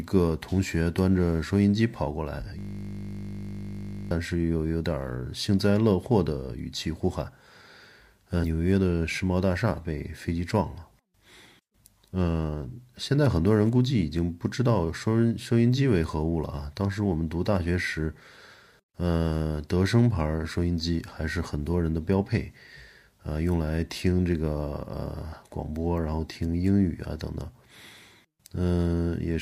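At 2.59 s the speech stops moving forward. A system hang loop takes over until 4.11 s. The computer or driver stalled, but the sound hardware kept reading the same stretch of its ring buffer. One 20 ms slice repeats exactly, about 76 times. Because the slice is so short, it does not stutter. It fuses into a steady buzz at 50 Hz. The buzz holds for about a second and a half, then normal audio resumes.

At 8.43 s there is a case of compressed frames skipped. Some of the coded audio never reached the output, either missing from the file or rejected by the decoder as damaged. The speech jumps ahead by roughly 50 ms. That fits about two frames of around 26 ms each.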